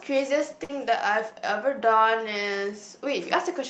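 At 0.63 s the speech breaks into a burst of packet loss lasting until about 0.71 s. Several consecutive packets never arrived in time, so the receiver stretched the last sound for roughly 56 ms while fading it down, then resumed about 60 ms further into the speech. On a waveform this shows as a decaying, repetitive stretch followed by an abrupt jump. On a spectrogram, the frequency pattern freezes into flat horizontal bands that dim before the next frame begins.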